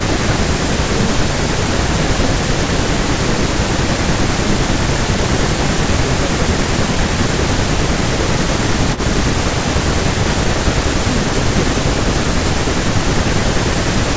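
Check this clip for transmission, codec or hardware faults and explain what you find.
Two faults are audible in this speech clip.

From 8.95 to 9.0 s there is an echo leak. A faint copy of the speech returns 262 ms late, roughly 20 dB down. A loudspeaker echo canceller likely missed it.

At 12.38 s a sudden gain jump drops sound and background noise together by about 12 dB until the end. The likely cause is a gain change applied without a ramp.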